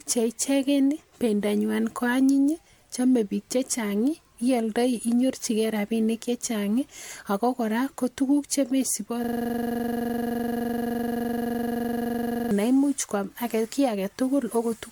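Speech recording with two faults. Throughout, the sound is swirly, hollow and smeared, with soft consonant attacks and a watery high end running up to about 20.1 kHz, more degraded than a single pass at around 98 kbit/s would leave. That points to generation loss, likely from roughly five successive MP3 encode-decode passes. From 9.24 to 12.51 s, a system hang loop replaces the speech: one 42.67 ms fragment repeats exactly, producing a rough 23.4 Hz buzz, which fits a 2048-sample ring buffer cycling while the driver stalled.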